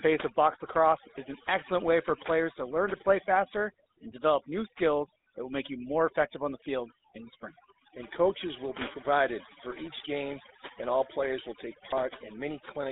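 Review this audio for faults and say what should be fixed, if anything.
Overdone noise removal runs throughout: the suppressor pulls individual bands to near silence whenever they approach its noise estimate, leaving a twinkling, empty background. Prevent it by using gentler reduction settings on the noisy source.

The GSM full-rate codec is also present throughout. Its pulse-excited vocal-tract model gives the speech a buzzy, gravelly roughness, and the line passes only about 250 Hz to 3.7 kHz, which fits the 13 kbps full-rate codec. Prevent it by carrying the audio over a wideband or higher-rate codec.

GSM bit errors cause a brief squawk from 11.90 to 11.93 s. At roughly 1% bit errors, corrupted filter, pitch or gain values distorted what sounds like a couple of decoded frames. Prevent it by improving link quality or adding stronger error protection.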